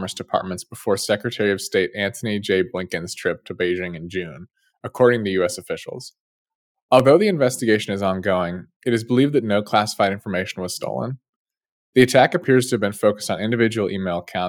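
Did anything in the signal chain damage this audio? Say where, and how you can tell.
Yes. Two sharp clicks are heard, at 4.70 s just before "according to" and at 7.00 s just before "the investigation is ongoing". Each is a single spike, a thin vertical line across the whole spectrum. No audible sound is missing around them. This points to dropped samples, likely at the driver or buffer stage. Well under a millisecond of samples went missing each time, so the waveform jumped straight to a later value.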